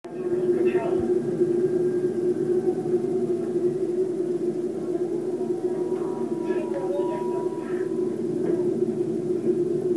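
Listening to this recording of everyday sounds, nothing stood out as a technical problem at any point.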